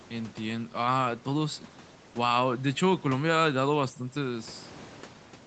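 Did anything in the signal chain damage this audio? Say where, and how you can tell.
No, nothing in the signal chain has damaged this speech. It has passed through call microphone processing and a WebRTC call path, and the sound stops at about 8 kHz, which fits a wideband Opus call setting.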